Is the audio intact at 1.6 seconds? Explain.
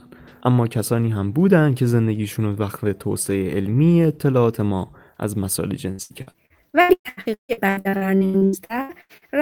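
Yes, at 1.6 seconds the speech runs on without any dropout, click, distortion or other audible fault.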